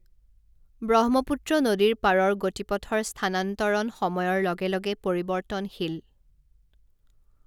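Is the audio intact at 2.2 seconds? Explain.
Yes, the speech at 2.2 seconds is intact, with no audible fault at that moment.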